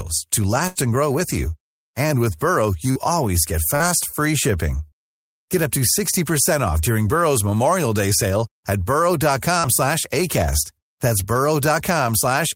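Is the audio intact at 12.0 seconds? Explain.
Yes, the audio is intact at 12.0 seconds, with no fault at that moment.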